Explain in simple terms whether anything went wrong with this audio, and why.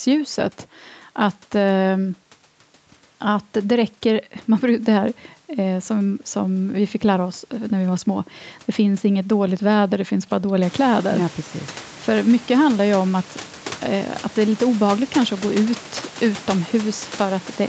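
Nothing went wrong with this speech recording: the background noise of the room gets noticeably louder a little after ten seconds in, but that's just the room itself, and the slightly muffled top end comes from the call's microphone processing and codec, which is normal for a call.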